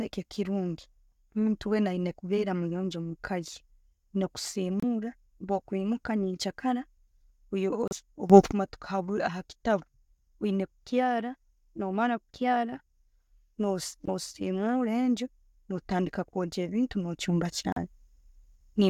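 A speech recording with two kinds of fault. Four short dropouts cut the sound to silence at 4.80, 7.88, 14.06 and 17.72 s, lasting 27, 34, 21 and 40 ms, then resume. These are likely Bluetooth stalls, where delayed packets let the receiving buffer run empty. Level also jumps abruptly. At 8.30 s the speech and background noise rise together by about 16 dB until 8.52 s. At 17.21 s they rise by about 6 dB and stay up to the end. Each is likely a sudden gain jump applied without a ramp.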